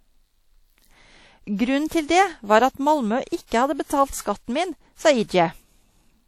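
A ringing, washy quality runs through the whole speech clip, with a hiss that swells and fades along with the sound and no content above about 17.2 kHz. This is likely WMA compression, and the damage is plainly audible. As a transform codec working in long blocks, it spreads quantisation noise over tens of milliseconds and discards weak spectral lines, which fits a bitrate around 48 kbps.

From 3.46 to 3.52 s a short hiss arrives just ahead of a sharp onset, and the attack itself sounds softened and smeared. This is pre-echo. The onset fell late in a transform block, so noise sized for the loud attack was spread evenly across the whole block, including the quiet stretch before it. The smear reaches about 53 ms ahead of the attack.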